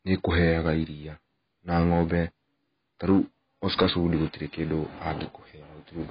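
Throughout the speech, the audio was likely squeezed through AAC compression at a heavy setting, consistent with AAC-LC at roughly 16 kbps. The encoder discards everything above 5 kHz and starves the remaining bands, so the sound is dull and smeared, with a warbling, fizzy edge on sibilants.

From 3.09 to 3.19 s and again from 3.70 to 3.90 s, the signal exceeds what the stage can pass, by about 4 dB and then about 9 dB, causing hard clipping. Its peaks are sliced flat, adding harsh upper harmonics heard as crackly fuzz, coarser in the second, longer burst.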